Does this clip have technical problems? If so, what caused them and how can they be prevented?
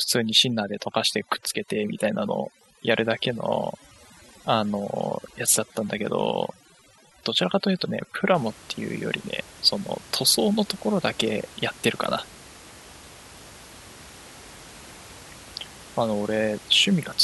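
Yes. From 0.0 to 8.35 s the speech sits over a near-silent background dotted with twinkling specks. This is overdone noise removal: the suppressor muted frequency bands near its noise estimate and stripped away quiet speech detail along with them. Prevent it by reducing the suppression strength.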